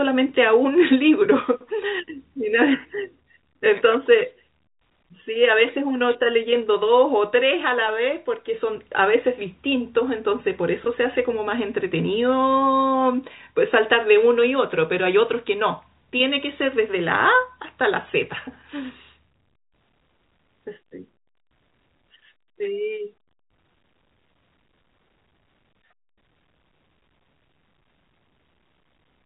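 No technical fault can be heard in the speech, which carries the narrow telephone bandwidth of G.711 A-law coding, with nothing above about 3.8 kHz.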